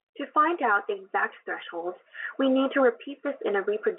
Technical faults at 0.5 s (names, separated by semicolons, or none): none